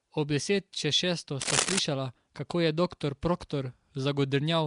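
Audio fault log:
throughout: Nellymoser compression. The speech was likely passed through the Nellymoser Asao codec, at a rate that points to about 44 kbps. It codes short blocks with a fixed bit budget, starving weak bands and filling them with noise, so the speech carries a plainly audible rough, hissy halo and a smeared, underwater quality. Nothing remains above 10.6 kHz, leaving the top end dull and closed off.
1.41 to 1.79 s: cable scratch noise. A worn cable, connector or control carrying a DC voltage was likely moved, making its contact resistance jump about rapidly. That injects dense, uneven bursts of noise into the path for roughly 0.37 s, heard as scratching and rustling laid over the speech at about the same level as the speech itself, so it competes directly rather than sitting underneath.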